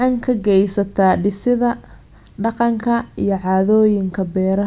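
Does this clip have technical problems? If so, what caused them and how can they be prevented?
No, there is nothing in this speech recording to trace back to a cause or to guard against.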